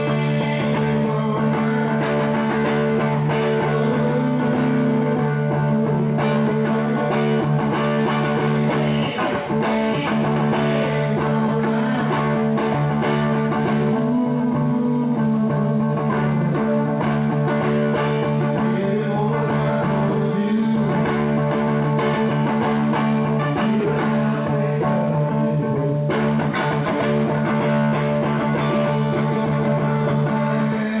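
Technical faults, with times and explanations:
No technical faults are heard, with times or otherwise, apart from the ordinary narrowband sound of the call path, which has nothing above 4 kHz.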